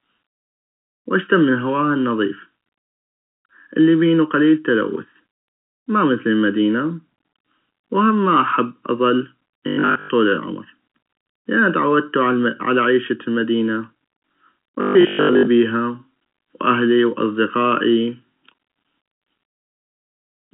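Throughout the speech, channel delay (comb filtering) leaves a hollow, phasey tone. One channel lags by about 0.7 ms, and summing to mono cancels evenly spaced frequencies starting near 700 Hz. A spectrogram shows fixed dark notch stripes within the telephone band, which ends around 3.7 kHz.

From 9.68 to 10.12 s, right after "وهم ما احب اظل", there is robotic sound from repeated short buffers: a rigid metallic buzz at 50 Hz that only loosely tracks the speech. It likely comes from 20 ms chunks being replayed while most of the real audio is skipped. The waveform shows identical repeating cycles, and the spectrogram shows evenly spaced harmonic lines.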